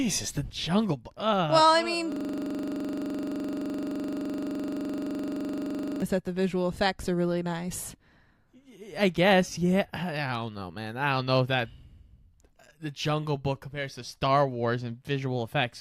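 From 2.12 s to 6.02 s the speech gives way to a rapid, mechanical rattle, a rough buzz pulsing at 23.4 Hz as one 42.67 ms fragment repeats exactly, about 90 times over nearly four seconds. This is a system hang loop: the computer or its audio driver froze, but the sound hardware kept replaying the same ring buffer. The loop length fits a 2048-sample buffer.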